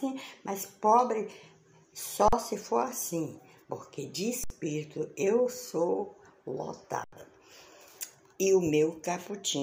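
The audio drops out three times with an underrun with held sample: at 2.28 s for about 43 ms, at 4.44 s for 64 ms, and at 7.04 s for about 85 ms. Each time the output buffer ran dry and the converter just held its last value, so the waveform sits flat rather than going to silence. When it comes back, the content has skipped ahead by roughly 40, 70 and 100 ms. The gaps fit 2048- and 4096-sample buffer blocks at 48 kHz.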